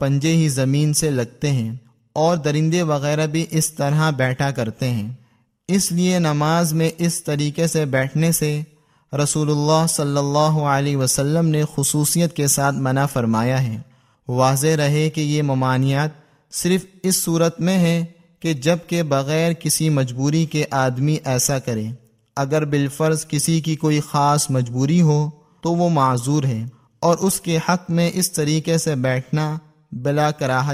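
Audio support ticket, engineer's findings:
No audible fault found on review. No symptom to log against any component in the chain.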